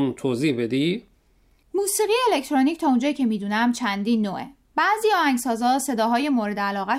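Speech, with no audible technical faults anywhere.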